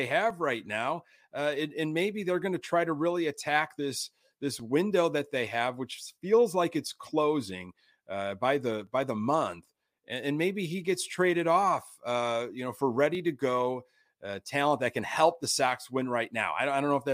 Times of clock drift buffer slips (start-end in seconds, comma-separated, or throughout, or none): 0.30-13.15